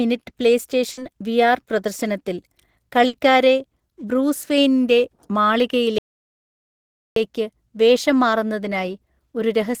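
At 0.91 s and again at 3.07 s there's a burst of packet loss. The receiver stretches the last sound into a fading buzz or hiss for about 60 ms, then the speech jumps ahead, skipping roughly 60 ms. Then from 5.98 to 7.16 s comes an audio dropout to silence, about 1.18 s of dead silence with no room tone. The input likely cut out while recording continued.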